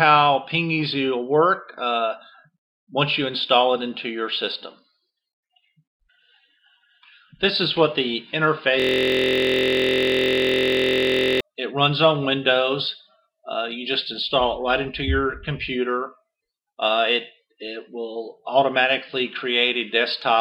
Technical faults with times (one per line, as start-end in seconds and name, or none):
8.80-11.41 system hang loop